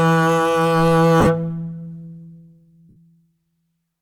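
Lost LE Audio frames: the LC3 decoder had to fill gaps by repeating the last spectrum with random signs. From 1.20 to 1.27 s, about 37.5 ms scattered over 60 ms turns the music into a brief noisy smear, and from 2.89 to 2.96 s a longer 67.5 ms gap smears more and starts fading.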